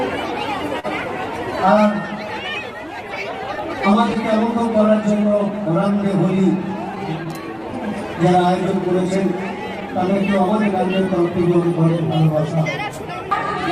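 Throughout the clip there is clock drift between sender and receiver: the sender's clock runs about three percent slower than the receiver's, so the jitter buffer keeps draining. The receiver has to stretch or repeat material to keep playing, leaving small timing hiccups spread unevenly across the whole recording.

From 0.79 to 0.86 s there is a short stall from a late packet. The packet arrived after it was due, the buffer ran dry, and the receiver held the last sound for 41 ms before resuming from the same point. Nothing is lost, but playback now runs 41 ms later, and that moment is audibly drawn out.

From 1.65 to 13.25 s come repeated timing corrections. To keep pace with the slow sender, the receiver repeatedly repeats short fragments, playing this stretch at about 98 percent speed and adding roughly 0.3 s in total. The edits are small and unevenly spaced, heard as faint hiccups or an unsteady tempo.

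Scattered short gaps appear twice. Between 3.57 and 4.55 s, about four late packets are covered by continuing the last sound, totalling about 30 ms, with the longest near 15 ms. Between 9.23 and 11.08 s, about seven are covered, totalling about 50 ms, with none much over 10 ms. Nothing is missing, and each patch passes as a brief tick or smear.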